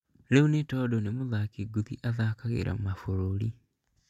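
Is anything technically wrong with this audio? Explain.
No, there are no faults.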